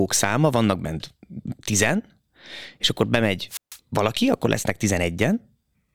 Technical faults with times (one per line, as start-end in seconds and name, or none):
3.48-3.79 wireless microphone squelch dropout